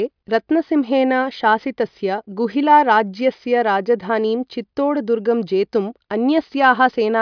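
No technical faults can be heard anywhere in the speech recording.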